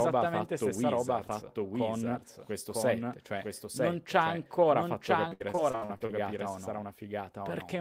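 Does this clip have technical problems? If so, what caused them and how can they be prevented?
Yes. The speech is likely being captured twice, with a second, slower path or a misaligned edit mixing another copy into the output. This doubled audio track runs through the whole clip. A full-band copy trails the original by about a second at roughly the same loudness, so phrases are heard again, cleanly, with no room colour or decay. To prevent it, make sure the source is routed through only one capture path, or remove the duplicate track when editing.

From 5.29 to 6.11 s, the stream repeatedly lost packets or received them late. The receiver filled each hole by stretching the last bit of sound before the next hole arrived. This is repeated packet loss, and it makes that stretch choppy, with pieces missing. About a third of the span is patched sound, roughly 300 ms is missing outright, and the longest gap is about 67 ms. 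To prevent it, use a more stable network connection with a larger jitter buffer or forward error correction.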